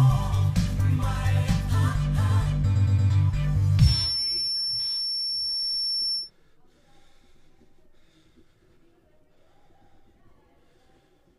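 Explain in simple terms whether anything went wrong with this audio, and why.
A feedback whistle plays from 3.77 to 6.31 s. It is a thin, steady tone near 5.4 kHz. It likely comes from a loudspeaker's sound leaking back into the microphone.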